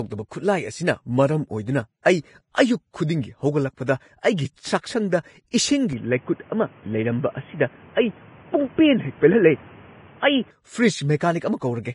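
A speech recording with heavy coding damage throughout: hissy, grainy treble and nothing above 10.6 kHz, likely from Vorbis compression at a low bitrate near 25 kbps. Pre-echo appears as brief hiss smeared ahead of sharp onsets at 2.02–2.06 s (33 ms), at 3.86 s (17 ms), and at 11.17–11.21 s (39 ms), where the codec spreads block noise into the quiet before an attack. From 5.93 s to 10.51 s the sound narrows to nothing above 3.4 kHz and carries new background noise around 30 dB below the signal. The level stays about the same and there is no gap at the change, which likely comes from the input switching to a poorer device.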